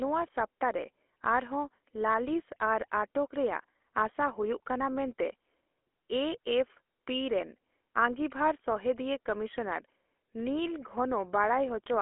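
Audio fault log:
Throughout, GSM full-rate codec: The speech sits in a 300 Hz to 3.4 kHz telephone band, with nothing above 3.8 kHz. A plainly audible buzzy, gravelly roughness results. A model of the vocal tract is driven by sparse, evenly spaced pulses, which fits a 13 kbps stream.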